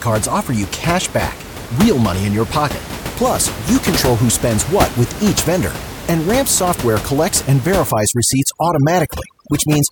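Speech with room noise about 10 dB below it. From 7.92 s, just after "software collects and", to the end, there is overdone noise removal: a noise reducer set too strong pulls individual frequency bands down or off wherever they sit near its noise estimate. The background turns into twinkling, warbling specks, and on a spectrogram it appears as scattered, isolated dots of energy with gaps between them.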